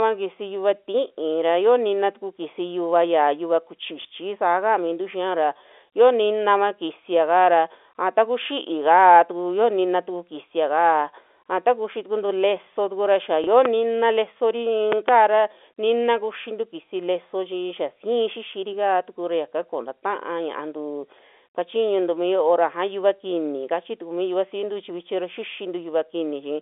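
At 4.02 to 4.05 s the speech catches in a small blip. This is packet loss with the last packet repeated. About 30 ms of audio went missing, which fits a single lost 30 ms packet, and the receiver filled the hole by replaying the packet before it. The same blip returns at 13.44 to 13.47 s, again one 30 ms gap filled by repetition.

Shortly after, at 13.65 to 13.68 s, a sharp loud pop lands about 15 dB above the speech, and the voice carries on underneath it. At 14.92 to 15.11 s two more pops follow in quick succession, peaking about 20 dB over the signal. Each is a sudden voltage step or spike added to the audio, likely from a plug, switch, static discharge or driver glitch, which the later circuitry shapes into a brief thump. All of this sits within the narrow 300 to 3.5 kHz band of G.711 telephone coding.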